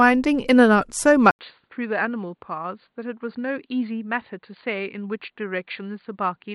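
An input switched to a poorer device from 1.31 s to the end of the clip. An 80 ms gap marks the switch, and after it the speech is cut off above 4.6 kHz. Its level drops by roughly 10 dB, and a new background noise sits about 50 dB below it. The likely cause is the recording moving to a different, narrower-band microphone or headset profile partway through, which leaves the speech sounding duller and boxier than the opening second.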